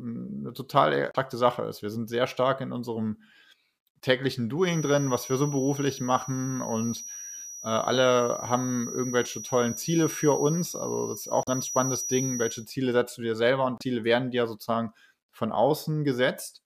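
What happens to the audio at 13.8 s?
Right after "du dir selber und", from 13.77 to 13.82 s, damaged data in the compressed stream makes the decoder misread frames and lose sync, giving a brief glitch before "werden dir sozusagen". A spectrogram shows a smeared broadband smudge with a hard seam.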